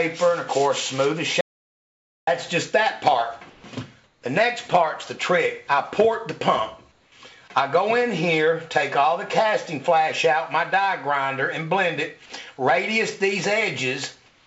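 From 1.41 to 2.27 s there is an audio dropout to silence: about 0.86 s of silence, with the sound cut off mid-flow and resuming abruptly, likely from the input link or device briefly failing. Unlike a quiet pause, not even room tone remains.

Comfort noise in place of the background follows in four short pauses, at 3.50 to 3.64 s, 4.04 to 4.22 s, 6.92 to 7.12 s, and from 14.26 s to the end. Each lasts 140 to 211 ms, where the background sits roughly 30 to 42 dB below the loudest passages. The real ambience gives way to a flat, featureless hiss about 2 to 4 dB quieter, likely discontinuous transmission switching off and the receiver synthesising noise. Unlike the dropout, the gap never goes fully silent. This comes through a call path whose band stops at 8 kHz, which fits G.722 wideband coding.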